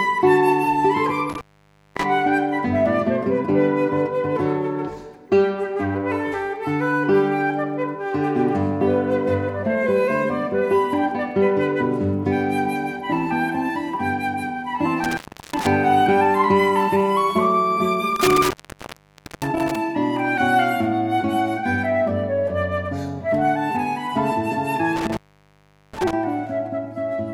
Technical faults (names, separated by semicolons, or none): intermittent contact